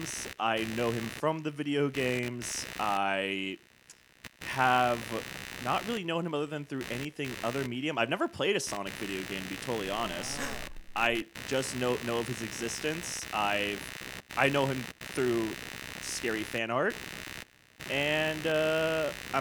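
Throughout, computer activity noise: processor or peripheral load disturbs the shared ground, producing a buzz pulsing around 70 Hz, roughly 10 dB below the speech, tracking the machine rather than the sound.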